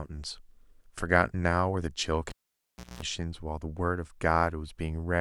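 At 2.29 s a live cable is pulled and plugged in. A pop drops the speech to near silence for 0.68 s. Within that gap, a 60 Hz mains buzz lasts 0.21 s, while only the tip touches. A second pop at 3.02 s brings the sound back.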